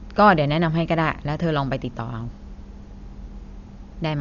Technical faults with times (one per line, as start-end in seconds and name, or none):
0.00-4.21 Dolby Digital compression